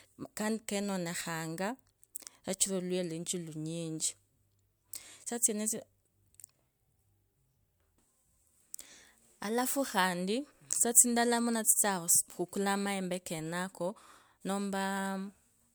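A speech recording with no audible technical faults anywhere in its signal.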